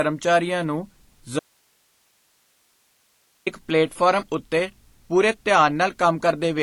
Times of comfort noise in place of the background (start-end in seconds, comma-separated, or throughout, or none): none